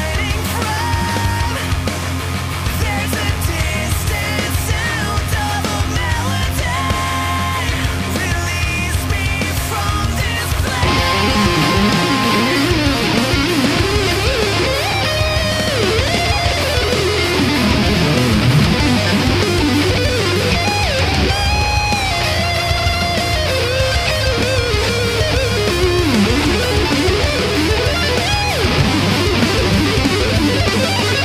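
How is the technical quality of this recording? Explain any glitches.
The recording is marred by a mains buzz running from start to finish. Mains buzz, present throughout: sharp switching spikes from a dimmer, rectifier or unshielded path enter twice per 50 Hz cycle, spraying harmonics into the kilohertz range. The result is a steady, raspy buzz sitting fairly prominently beneath the sound.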